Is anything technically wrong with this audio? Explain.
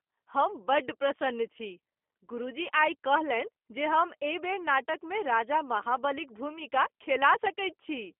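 Yes. G.729 codec damage runs throughout. The speech is rebuilt from a vocal tract model and sparse pulses, which fits 8 kbit/s. It sounds rough and synthetic, with nothing above 3.5 kHz.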